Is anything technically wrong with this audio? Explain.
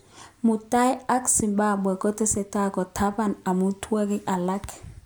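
Yes, there's a loud pop in this speech clip, from about 1.40 to 1.42 s. It's a single sharp click, roughly 10 dB above the speech, and the talking carries on underneath. That's likely a sudden voltage spike, maybe a switch or static discharge, getting into the signal path.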